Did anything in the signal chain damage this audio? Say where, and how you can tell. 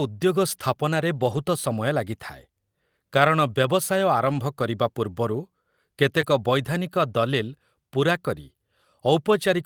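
Yes, at the network and codec stage. Lost packets rebuilt from error correction sound rough and noisy at 1.15–1.37 s after "ଉଦ୍ୟୋଗ ସ୍ଥାପନାରେ", at 4.17–4.43 s, and at 6.23 s. The decoder played low-bitrate backup copies.

There is also short concealed packet loss at 6.21–6.25 s, heard as a brief smear. The decoder extended the last sound for 13 ms to fill the hole.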